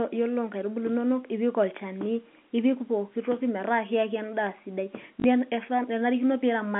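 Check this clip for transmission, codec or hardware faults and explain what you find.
One transmission fault: packet loss with the last packet repeated, at 5.2 to 5.24 s, right after "metaa kiaki endaa sidai". About 40 ms of audio never arrived, which fits two lost 20 ms packets, and the receiver filled the gap by replaying the last good packet. The short run takes on a 50 Hz buzz, heard as a brief robotic stutter. The telephone band from the G.711 coding is audible throughout.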